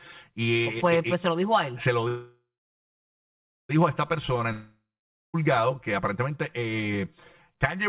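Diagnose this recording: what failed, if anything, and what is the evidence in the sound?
Channel delay (comb filtering), at the wiring or mono-mix stage, runs through the whole clip. The speech sounds hollow and phasey. One channel lags the other by around 5 ms. Summed to mono, they cancel at evenly spaced frequencies, starting near 100 Hz.

A call audio freeze runs from 2.08 to 3.71 s, most likely from packets stalling on the network. The last sound smears into a fading buzz or hiss, then about 1.25 s of silence. Speech resumes at "a esta" with nothing lost. The buffer ran dry and added a 1.61 s gap.

A long network dropout runs from 4.52 to 5.36 s. The likely cause is audio that never arrived. A brief fading buzz or hiss gives way to about 0.51 s of silence. Speech returns further on, and about 0.82 s is missing. Within the G.711-band audio, nothing above 4 kHz survives.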